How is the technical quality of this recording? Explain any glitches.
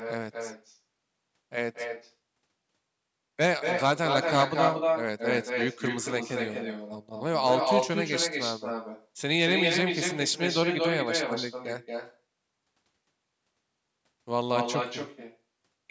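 The recording has two problems: a DC offset that runs the whole way through, and repeated stretches of echo leak, a delayed copy of the speech coming back.

The DC offset is constant from start to finish. The waveform sits shifted off zero by a fixed amount, so you won't hear it as such. It eats into headroom and shows up as steady energy right at the bottom of the spectrum, below the bass.

The echo leak appears at 0.00–0.14, 0.31–0.79, 1.73–2.13, 3.6–7.23, 7.4–9.08, 9.48–12.19 and 14.55–15.38 s. A second copy of the speech trails about 229 ms behind. It is likely a loudspeaker on the far end whose echo canceller let pickup through. It is clearly quieter early on, about as loud as the speech itself from 3.6 to 12.19 s, and a bit quieter again at the end.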